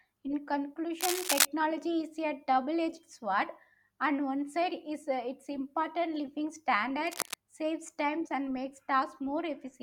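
A worn cable, connector or control was likely disturbed twice in this speech recording, its contact resistance jumping about and injecting cable scratch noise. From 1.00 to 1.45 s, just before "is a", dense, uneven scratching rides over the speech, louder than the speech itself. A quieter burst, somewhat below the speech level, rustles from 7.06 to 7.35 s, between "important living" and "saves times and makes".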